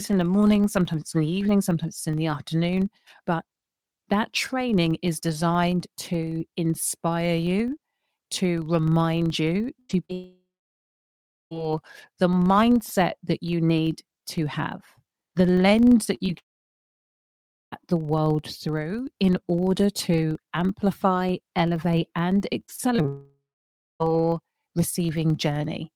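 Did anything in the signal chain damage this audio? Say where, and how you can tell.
Yes. Damage comes from two stages: a processing filter in the block-based chain, and the network path feeding the receiver.

A filter restarted on every block runs through the whole speech clip. The filter's memory is cleared at each block boundary, so each block starts from zero and leaves a small transient. The result is a steady buzz at 23.4 Hz that rises and falls with the speech level. That repetition rate fits a 2048-sample block, which places the fault in the block-based processing rather than in the network.

A burst of packet loss occurs at 9.79 to 9.91 s, right after "you to remind you". About 100 ms of audio never arrived. The receiver continued the last sound for roughly 97 ms while turning it down, so a held, fading buzz or hiss replaces the real material. The speech then picks up further along, with the intervening portion gone.

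Short concealed packet loss follows at 10.05 to 10.11 s. Only 40 ms is missing. The decoder bridged it by extending the preceding sound, then crossfaded back into the real stream. The result is a brief smear or wobble rather than an obvious gap. That is typical of jitter-buffer concealment covering a packet or two that arrived too late.

Three long network dropouts are audible, at 10.13 to 11.53 s, 16.38 to 17.74 s, and 23.08 to 24.02 s. Each begins with the last sound stretched into a decaying buzz or hiss, then falls to silence for about 1.1 s, 1.3 s and 0.6 s respectively. Speech resumes later with roughly 1.4 s, 1.3 s and 0.9 s of content missing. The likely cause is a stall in the network path long enough for concealment to give up.

Repeated packet loss (robotic sound) appears at 16.05 to 16.30 s, just after "to have the lens", and at 22.66 to 23.06 s, after "to amplify elevate and". 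Each stretch holds four short gaps, none longer than about 22 ms, patched by extrapolation. Concealment covers about 29% and 20% of those spans. The rapid alternation of real and synthesized audio gives a choppy sound with pieces missing. Both stretches lead directly into the long dropouts that follow them.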